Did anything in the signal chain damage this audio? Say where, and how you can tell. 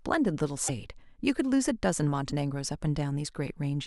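Yes, at the codec stage. At 0.67–0.70 s and 2.29–2.32 s the sound skips ahead into a 30 ms garbled stretch, a break in the waveform. Likely a broken MP3 bit reservoir: after missing frames, decoding borrowed the wrong frame's bytes.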